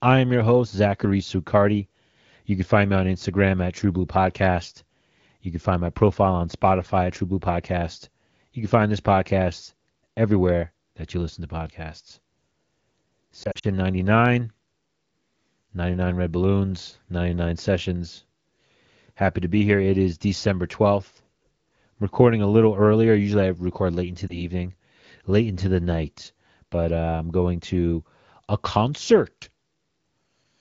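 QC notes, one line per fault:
13.43–13.66 s, lost AMR speech frames: radio errors caused frames scattered across about 0.2 s to fail their checksum, with the longest gap only 40 ms. The wideband decoder covered each gap by repeating the last good pitch and vocal tract settings at falling gain, so the sound warbles and dips in short bursts, dropping to near silence in the longest gap, then comes back briefly thin and rough.
24.28–24.41 s, lost AMR speech frames: a single 20 ms frame was corrupted and replaced by concealment, giving one brief dip or warble before the sound recovers.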